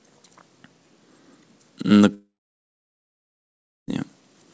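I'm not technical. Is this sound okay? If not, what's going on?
No. At 2.14 s the speech cuts out and is gone until 3.89 s: a brief fading buzz, then about 1.6 s of silence. This is likely a long network dropout. The audio stopped arriving, and that stretch of speech is lost for good.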